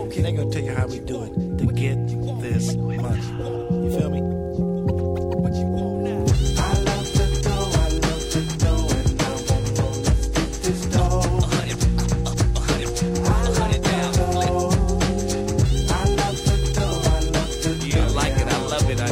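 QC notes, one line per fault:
No faults detected on listening; nothing to flag at any point.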